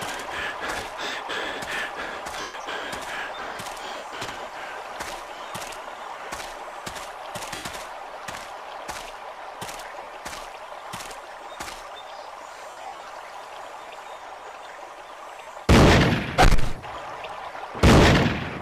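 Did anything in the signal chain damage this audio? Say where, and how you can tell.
Yes. The Bluetooth link dropped LE Audio frames, and the LC3 decoder's concealment filled the gaps. There were six dropouts: 2.41 s (130 ms), 3.97 s (50 ms), 7.55 s (90 ms), 10.03 s (40 ms), 12.70 to 13.10 s (gaps scattered over 400 ms, the longest about 70 ms), and 15.42 s (50 ms). The decoder repeats the last spectrum with random phase, so tones blur into a noisy smear, and the 130 ms gap fades toward silence.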